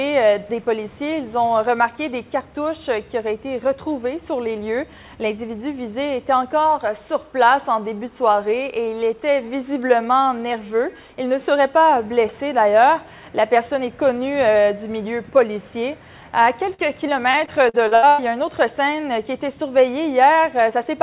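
Short concealed packet loss at 16.74 to 16.95 s: roughly 40 ms of this call audio arrived too late or not at all, so the receiver bridged the hole by extending the preceding sound for about 44 ms, then trimmed about 11 ms while merging back into the real signal. The join is heard as a brief smear or wobble rather than silence. Throughout, the sound is band-limited with nothing above 4 kHz, which fits a G.711 mu-law path at 64 kbps. Repeated packet loss (robotic sound) follows from 17.31 to 18.20 s. Six separate dropouts, the longest 100 ms and about 300 ms in total, each get patched by stretching whatever came just before. Because a new gap lands before the previous patch has settled, about a third of that stretch is synthesised filler, and the audio turns choppy with pieces missing.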